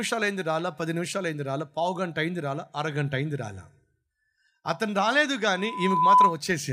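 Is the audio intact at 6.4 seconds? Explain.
No, there's loudspeaker feedback squeal from 5.55 to 6.38 s: the mic hears its own speaker, so a 1 kHz tone swells over about half a second and howls well above the speech.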